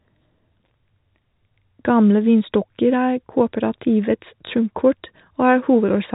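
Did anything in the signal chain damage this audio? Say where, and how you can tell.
No, nothing damaged this audio.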